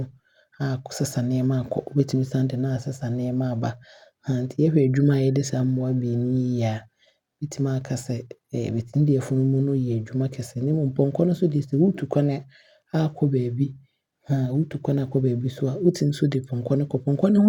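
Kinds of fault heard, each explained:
No faults heard.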